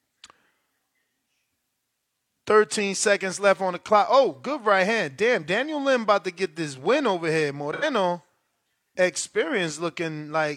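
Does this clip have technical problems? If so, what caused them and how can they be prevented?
Yes, there's one. Right after "this win over here", from about 7.73 to 7.84 s, you get AAC frame loss with concealment. Roughly 85 ms of the stream went missing, which fits two lost AAC frames, and the decoder papered over the gap by reusing the last good spectrum. That's why the patch sounds smeared and a bit noisy or phasey instead of dropping to silence. To prevent it, add forward error correction or redundancy on the transport, or give the stream a deeper jitter buffer.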